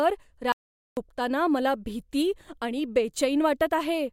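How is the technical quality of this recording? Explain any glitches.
There's one glitch worth flagging. From 0.52 to 0.97 s there's an audio dropout to silence: about 450 ms of dead silence with no room tone, likely from a briefly lost input. Speech cuts back in on "मला भीती आणि".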